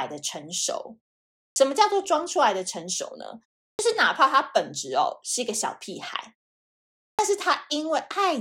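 Speech, with a clipped start after a pause at 1.5 s, 3.73 s and 7.12 s, where roughly 60 to 67 ms of onset is lost as the output device wakes from silence.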